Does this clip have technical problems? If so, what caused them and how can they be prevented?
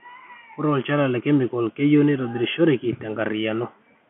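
No, the speech comes through an ordinary G.711 telephone channel whose roughly 150 Hz to 3.4 kHz band and faint level-following hiss fit standard 64 kbps mu-law coding, and nothing else in the signal stands out as a technical problem.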